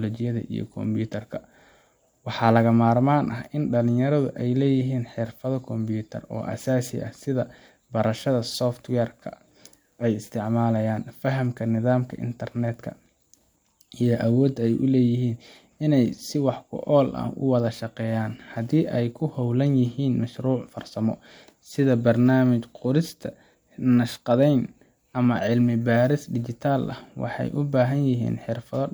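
Speech recording with no audible technical faults.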